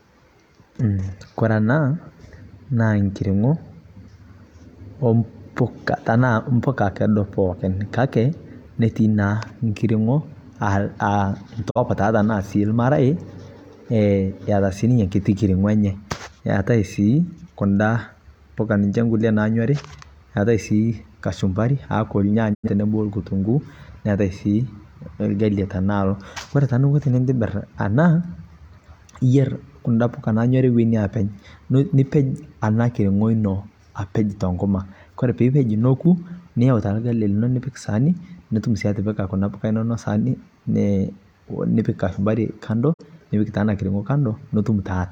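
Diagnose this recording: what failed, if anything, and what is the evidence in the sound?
Digital broadcast dropout at the receiver's decoding stage: 20 ms fades to silence at 11.69, 22.53 and 42.92 s (before "nipik taa"), gaps fitting one or two lost 43 ms frames.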